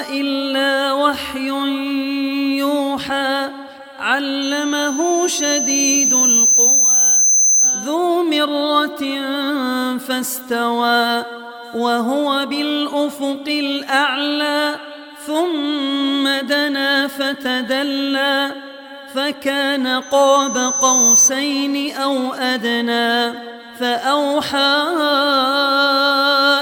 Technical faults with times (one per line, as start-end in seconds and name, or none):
4.42-7.96 loudspeaker feedback squeal
20.02-21.31 loudspeaker feedback squeal